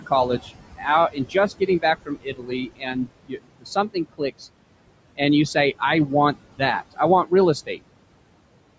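Speech in which the background sinks between phrases and lifts under them; these are noise suppressor artifacts, with the room noise, about 14 dB below the speech, pulled down by about 21 dB. Parts of the speech sound swallowed or faint at 0.39 to 0.53 s, 0.76 to 0.86 s and through much of 1.11 to 4.21 s, speech cut by the noise suppressor as it mistook quieter speech for noise and turned it down by as much as about 22 dB. The audio also carries nothing above 8 kHz, as expected from call microphone processing.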